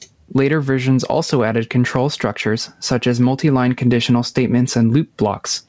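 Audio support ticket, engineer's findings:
Gain pumping, throughout. Gain pulled down under each loud syllable, swing around 10 dB. Likely cause: input gain far too high, fast limiter or compressor clamping every peak. Waveform: flattened peaks. Spectrogram: content stops near 8 kHz, which fits the G.722 call path.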